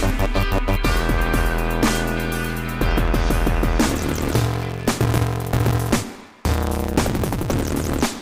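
From 3.86 s to the end of the clip, the audio shows a block size mismatch (truncated): one stage hands on longer blocks than the next stage takes, so the tail of every block is discarded. The gaps produce a steady buzz at 188 Hz, which fits a 256-sample read size, and the material runs 1.88 times faster. Unlike a sample-rate mismatch, the pitch stays near normal while the timing races ahead.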